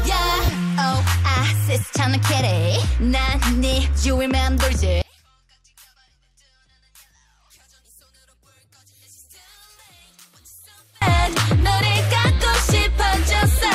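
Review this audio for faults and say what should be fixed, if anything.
From 5.02 to 11.02 s the level drops by about 32 dB and what remains sounds faint. This matches one channel inverted: with one side's polarity likely reversed, everything common to both channels cancels in a mono sum, leaving only their difference. To prevent it, check channel polarity at each stage and audition a mono fold-down before delivery.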